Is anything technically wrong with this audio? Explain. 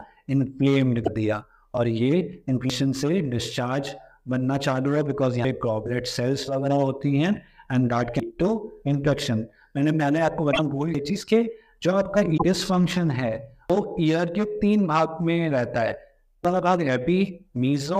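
Yes. Damaged data in a compressed stream at 1.01–1.08 s, 10.50–10.59 s and 12.36–12.43 s: the decoder loses frame sync on corrupted bytes and resyncs, producing brief squawks or blips.

Audio missing between chunks at 2.70, 5.45, 8.20, 10.95, 13.70 and 16.45 s: regular skips losing roughly a third of a second each, likely from 3-second chunk handoffs joined without a gap.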